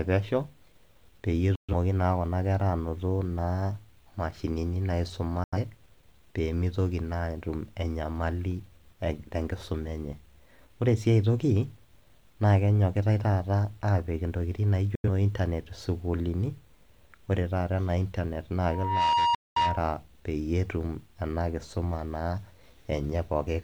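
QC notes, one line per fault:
1.55–1.74 s, 5.44–5.58 s, 14.95–15.09 s (just after "aapik intokitin") and 19.35–19.61 s, digital broadcast dropout: the speech snaps to silence within about 3 ms and returns abruptly after holes of 128, 85, 85 and 213 ms. The receiver muted on lost or corrupt frames. The hole lengths fit whole frames of roughly 43 ms, and that speech is gone.
18.63–19.95 s (just after "taata ena internet"), loudspeaker feedback squeal: a steady 946 Hz tone swells over roughly 0.4 s to sit about 5 dB above the speech. A microphone was picking up its own loudspeaker, and the loop gain exceeded one at that frequency. The last dropout cuts into it.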